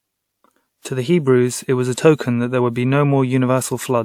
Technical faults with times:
0.80-0.85 pre-echo

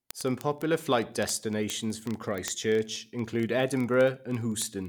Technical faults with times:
0.11-4.88 word clock ticks

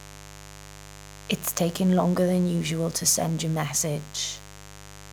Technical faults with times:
0.00-5.13 mains buzz

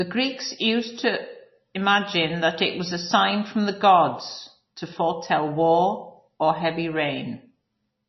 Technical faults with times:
0.00-8.08 MP3 compression

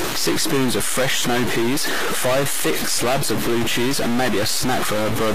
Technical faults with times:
0.00-5.34 stuck bit
0.00-5.34 HE-AAC compression

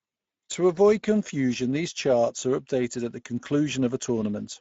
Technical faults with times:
0.00-4.60 Speex codec

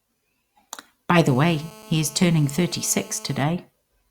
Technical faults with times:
1.28-3.44 GSM phone buzz

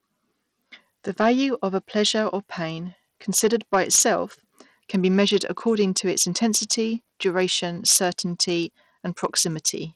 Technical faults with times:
0.00-9.96 Bluetooth SBC compression

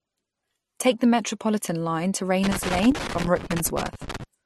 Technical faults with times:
0.00-4.45 transcoding between lossy codecs
2.43-4.23 loose connector crackle

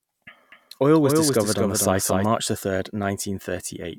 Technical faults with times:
0.52-2.26 doubled audio track

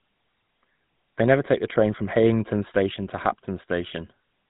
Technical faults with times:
0.00-4.49 GSM full-rate codec

